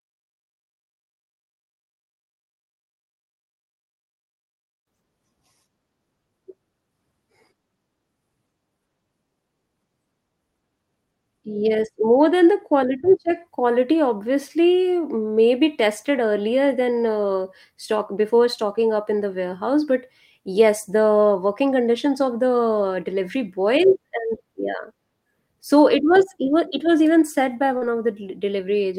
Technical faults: short concealed packet loss

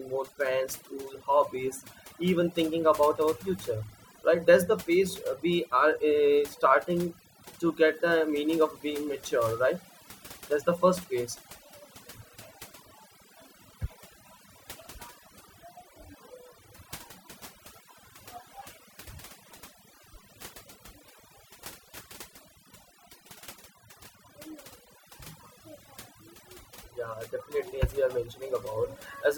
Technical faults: overdone noise removal

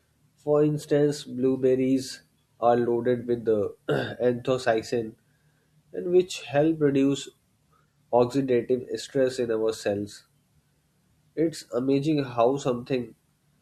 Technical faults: none

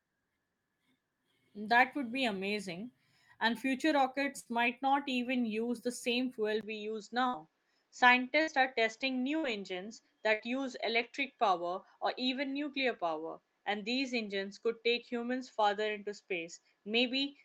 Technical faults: burst of packet loss; input switched to a poorer device

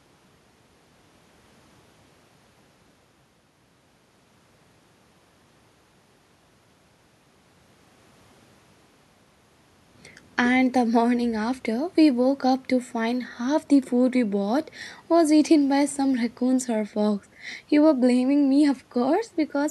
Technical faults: none

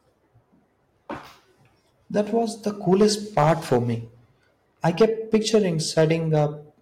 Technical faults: hard clipping

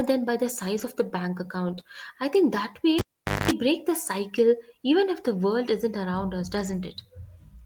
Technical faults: lost packet rebuilt from error correction; short concealed packet loss; cable pulled and plugged in

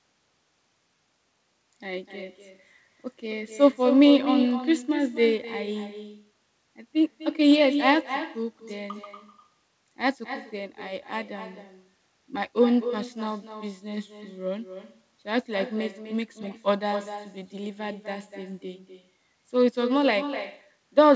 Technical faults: echo with no canceller

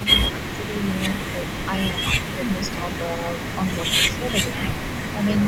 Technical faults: speech suppressed in double talk; echo leak

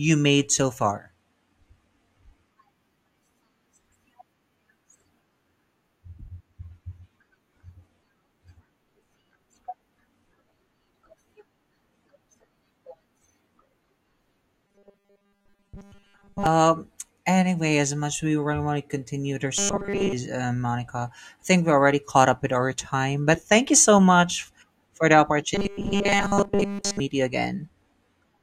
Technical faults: robotic sound from repeated short buffers

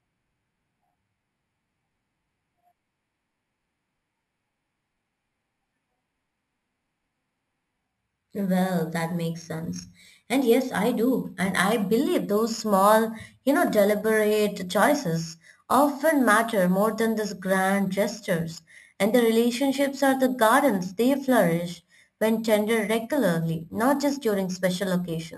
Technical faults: imaging from sample-and-hold upsampling

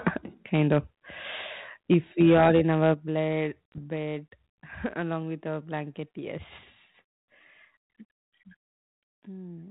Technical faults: microphone overload; microphone volume stepped down; bit errors on an ADPCM link

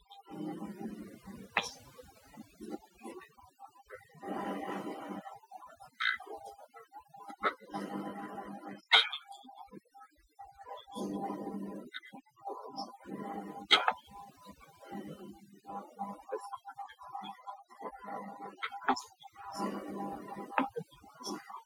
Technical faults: overdone noise removal

